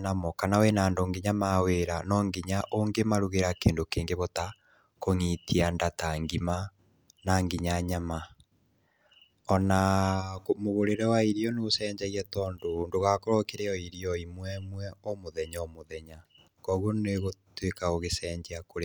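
No technical faults can be heard anywhere in this speech clip.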